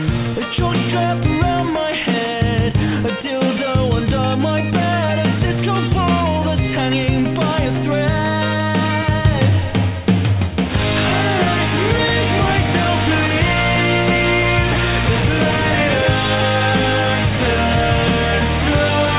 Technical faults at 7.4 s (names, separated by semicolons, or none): none